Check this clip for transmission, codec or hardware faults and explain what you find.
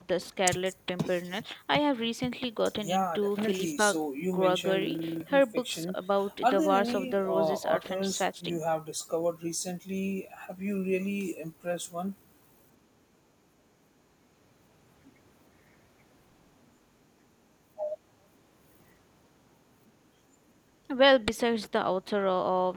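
One fault is present: a system hang loop from 4.82 to 5.21 s. The computer or audio driver stalled, but the sound hardware kept replaying the same stretch of its ring buffer. A 42.7 ms slice of speech repeats exactly nine times, about 23.4 times per second, which fits a 2048-sample buffer. At that loop length the result sounds like a rapid, rattling stutter bordering on a buzz, and roughly 0.4 s of real speech is lost while the loop runs.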